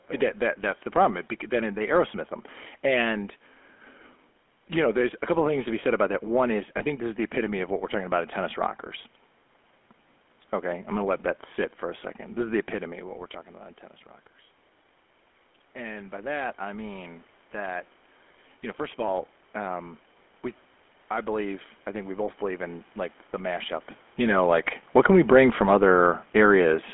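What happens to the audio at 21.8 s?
At 21.8 s the speech is still carrying the GSM full-rate codec, which runs through the whole clip. The codec rebuilds the voice from a vocal-tract model driven by a sparse pulse excitation, consistent with a 13 kbps rate, leaving a plainly audible buzzy, gravelly roughness in a band squeezed to about 250 Hz to 3.4 kHz.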